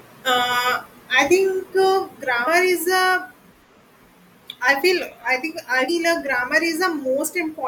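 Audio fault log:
2.46 s and 5.88 s: damaged data in a compressed stream. Corrupted bytes leave the decoder misreading a frame and resyncing, so each point gives a brief blip under 20 ms in the speech.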